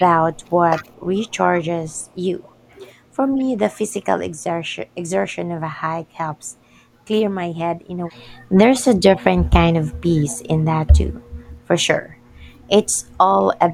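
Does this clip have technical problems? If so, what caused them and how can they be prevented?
Yes. An echo leak is heard from 0.00 to 3.43 s, at 8.76 to 8.81 s and from 10.28 to 11.17 s: a faint copy of the speech trailing by 206 ms, about 20 to 35 dB below it. The likely cause is a far-end loudspeaker whose echo canceller let residual echo through. Proper echo-canceller tuning, lower speaker volume or a headset prevents it.

Speech suppressed in double talk appears from 0.0 to 3.6 s, 4.74 to 5.1 s, 6.55 to 9.99 s and 12.93 to 13.68 s. The level dips in pieces by as much as 25 dB while both sides talk, likely because the echo canceller attenuated near-end speech along with echo. Better double-talk detection, or headsets on both sides, prevents it.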